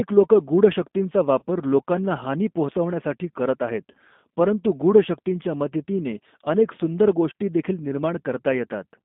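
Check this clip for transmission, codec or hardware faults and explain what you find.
Two faults are present: codec coloring across the whole clip and two brief dropouts patched by concealment.

The G.729 codec runs throughout at 8 kbit/s, rebuilding speech from a filter, pitch predictor and sparse pulses. It sounds slightly rough and synthetic. A spectrogram shows energy confined to roughly 200 Hz to 3.6 kHz, with nothing above.

VoIP packet loss concealed by the speech codec occurs at 1.39–1.44 s and 3.91–3.97 s. Each gap points to one lost 30 ms packet, filled by extrapolating the last pitch and filter at falling gain. The spectrogram shows frozen, smeared harmonics, and the waveform shows a decaying tail.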